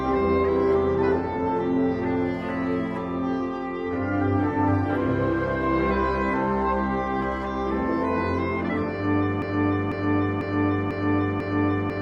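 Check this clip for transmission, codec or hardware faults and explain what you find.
One fault is present. A broken-record loop starts at 9.42 s and lasts to the end: a half-second fragment of sound, about 0.5 s long, repeats exactly five times back to back. The player or stream likely stalled and kept replaying its last held fragment, so the audio due after 9.42 s never arrives.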